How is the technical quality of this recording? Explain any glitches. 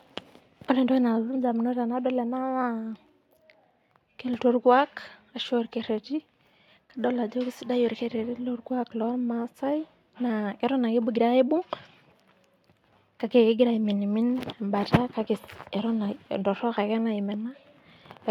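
No glitches or technical faults can be heard anywhere in the recording, so the signal's technical quality is sound throughout.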